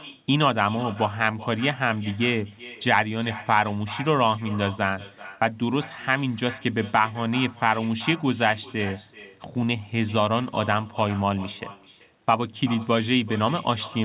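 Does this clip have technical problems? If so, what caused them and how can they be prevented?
Yes. Echo with no canceller: the far end played the call on a loudspeaker, its microphone picked that up, and nothing removed it, so the speech came back after the network round trip. Throughout the clip, every phrase is shadowed roughly 0.4 s later by a thinner copy about 17 dB quieter. It sits within the narrow telephone band of the call path, which stops at 4 kHz, consistent with G.711 mu-law. Turning on acoustic echo cancellation at the far end, or having that listener use a headset, would prevent it.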